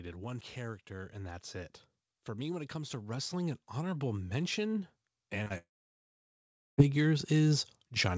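Automatic gain rising affects this speech recording from 0.54 s to the end: the gain control judged the input too quiet and kept lifting its gain, so the voice and the background swell together rather than holding a steady level. Two short concealed packet losses follow back to back at 5.44 to 5.48 s and 5.48 to 5.52 s, each about 20 ms of audio that missed the decoder and was patched by extending the preceding sound, heard as a quick smear or wobble. From 5.58 to 6.80 s there is a long network dropout, likely from a stall in the connection: roughly 1.2 s of audio never arrived, the receiver briefly carried the last sound on as a fading buzz or hiss, and then about 1.1 s of near silence remains before the speech resumes with that stretch missing. Throughout, nothing is heard above 8 kHz, consistent with the G.722 call codec's bandwidth.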